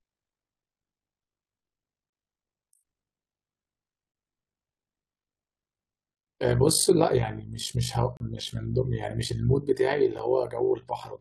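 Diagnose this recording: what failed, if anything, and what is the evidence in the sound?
A frame-based processing stage reassembled the speech with windows whose overlap does not sum to constant gain, leaving overlap-add ripple. Across the whole clip the level swings by about 11 dB roughly 50 times a second, heard as a rough flutter.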